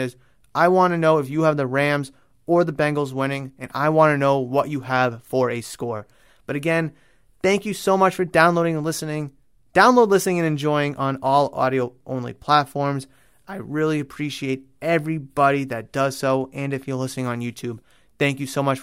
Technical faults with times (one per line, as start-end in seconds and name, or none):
15.84-17.19 channel delay (comb filtering)